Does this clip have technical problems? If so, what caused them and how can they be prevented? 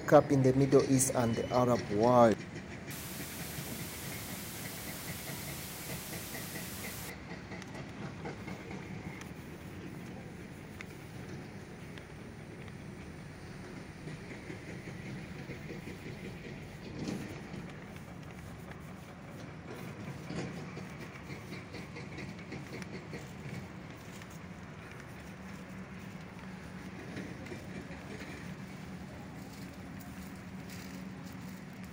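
Yes. From 2.91 to 7.10 s there is low bit depth with dither. The audio is held to 6 bits, and dither added before rounding turns the error into a steady, even hiss nearly as loud as the sound, with no distortion. A spectrogram shows a flat broadband noise floor across all frequencies, and the waveform looks fuzzy and thickened. To prevent it, keep processing at 24 bits and reduce word length only at final export, never below 16 bits.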